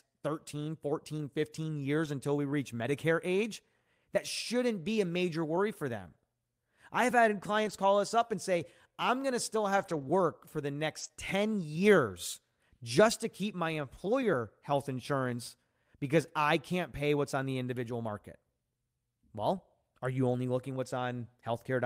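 From 2.05 to 2.07 s, just before "until we reach", a lost packet rebuilt from error correction swaps 20 ms for a rougher, noisier low-bitrate copy carried in the next packet, so nothing drops out. The same happens from 7.65 to 7.71 s between "I've had" and "call us up and" (40 ms), from 9.77 to 10.07 s (160 ms, which fits eight separate 20 ms packets), and from 10.99 to 11.05 s after "for the" (40 ms).

Right after that, from 11.07 to 11.11 s, a short concealed packet loss follows. 20 ms arrived too late to decode, and the receiver filled the gap by extending the preceding sound before blending back into the real signal. It is heard as a brief smear or wobble.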